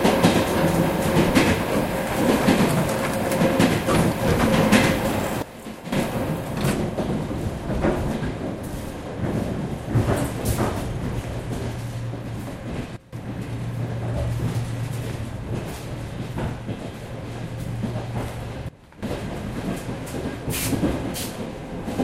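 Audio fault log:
5.42 to 19.03 s, sudden gain jump: the level drops abruptly by about 14 dB from 5.42 to 5.92 s, about 16 dB from 12.97 to 13.13 s, and about 15 dB from 18.69 to 19.03 s. Each time the background falls with the sound and both snap back at the end, with no fade either way. The likely cause is a digital gain change applied between one sample and the next, with no ramp to smooth the switch.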